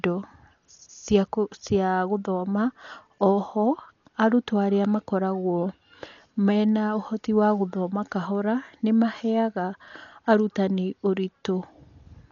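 Speech carries heavy codec damage throughout, with nothing above 7 kHz, likely from Dolby Digital compression at a rate fitting about 40 kbps. Unlike a plain low-pass filter's clean dullness, the starved frequency lines come back as rough, fluttering dither noise around voiced tones.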